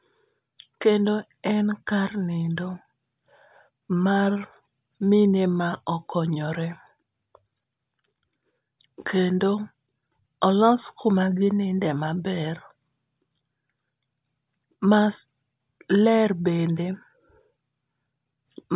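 Nothing in this speech recording registers as a technical fault at any point in its duration.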